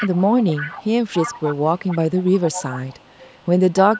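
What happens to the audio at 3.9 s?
At 3.94 s an echo leak begins and lasts to the end of the clip. A faint copy of the speech returns about 283 ms late, roughly 15 dB down. Likely cause: a loudspeaker on one side of the call whose echo canceller let its pickup back through.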